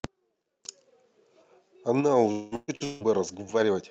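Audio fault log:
2.31–2.54 s and 2.84–3.03 s, long network dropout: Two gaps in the speech are each filled by a concealment buzz or hiss that holds the last sound and fades without reaching silence, about 200 ms and 160 ms long. The speech then resumes further on, so roughly 200 ms and 160 ms of it are lost. The likely cause is the stream stopping arriving long enough for the receiver to synthesise over the whole hole.
2.55–2.71 s and 2.76–2.83 s, burst of packet loss: Shorter holes sit between and beside the dropouts, about 120 ms and 40 ms of missing speech. The receiver extended the preceding sound and lowered its level across each gap, so it comes across as a brief held buzz or fading hiss before the speech picks up later. Together with the dropouts, this makes the stretch from 2.31 to 3.03 s break up repeatedly.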